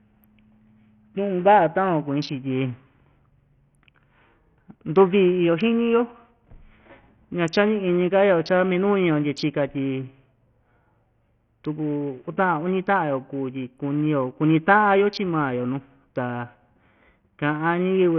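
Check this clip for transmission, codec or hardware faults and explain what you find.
One fault runs through the whole speech clip: heavy Bluetooth SBC compression, likely from a starved low-bitrate link, with the coarseness pointing to roughly 48 kbps. Few bits reach the upper sub-bands, so treble vanishes above 8.6 kHz and gritty quantisation noise rides on the sound. A spectrogram shows a hard ceiling at 8.6 kHz with speckled, smeared energy below it.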